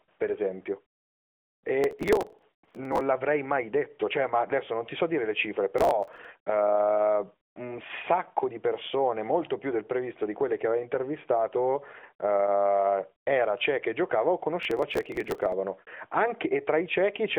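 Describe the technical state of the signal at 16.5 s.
At 16.5 s the audio is intact, with nothing amiss beyond the band-limited sound of the AMR narrowband mobile codec it passes through.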